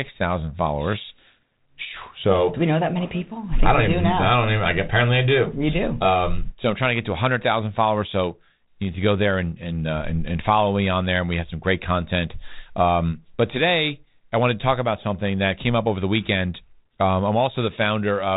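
Nothing in this speech recording is technically wrong. It has passed through G.726 ADPCM coding at 32 kbit/s, which leaves only a light trace and no content above about 3.9 kHz.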